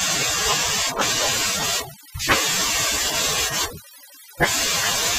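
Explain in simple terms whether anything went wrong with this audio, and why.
Something did go wrong: the whole clip suffers from overdone noise removal. A noise-cleaning tool was pushed too hard, so it switched off small slices of the sound wherever they resembled the background noise. Quiet parts of the speech were cut along with the noise. That leaves near-silent gaps filled with faint twinkling specks. Unlike plain muffling, the sound isn't just dull. It flickers and warbles as bits vanish and return.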